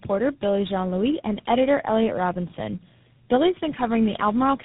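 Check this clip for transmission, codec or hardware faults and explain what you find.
There's one fault, running through the whole clip: tandem speech coding. The speech was decoded and re-encoded across several narrowband codecs in a row, each one compounding the last's damage. It sounds rough, muffled and warbly, with nothing above 3.8 kHz.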